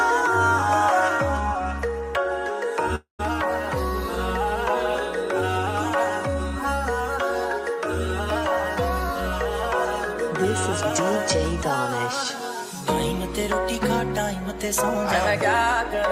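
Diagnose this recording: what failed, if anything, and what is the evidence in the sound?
Network stage. At 2.95 s the sound breaks off. The last instant is stretched into a fading buzz, followed by about 120 ms of silence. At 3.21 s the audio resumes with about 240 ms lost. This is likely a long network dropout, where the receiver concealed the gap until it ran out.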